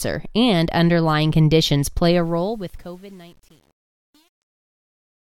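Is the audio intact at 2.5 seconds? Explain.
No. From 2.08 s to the end, the fade-out is rendered at only about 9 bits without dither, so truncation distortion makes it gritty, worsening after 2.58 s.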